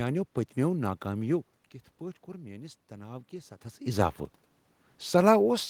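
In a speech recording, automatic gain rising occurs from 2.24 to 4.21 s: after the input drops by about 13 dB, the gain control slowly lifts its gain by about 4 dB, so voice and room noise swell together. A talker shifting position near 1.5 and 3.5 s would change only the voice level.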